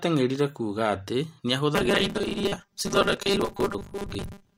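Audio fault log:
1.75–4.57 s, robotic sound from repeated short buffers: a rigid 200 Hz buzz, likely from a 5 ms buffer replaying over about half the audio; the spectrogram shows evenly spaced horizontal harmonic stripes.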